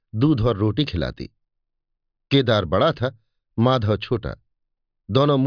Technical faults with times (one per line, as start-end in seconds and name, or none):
none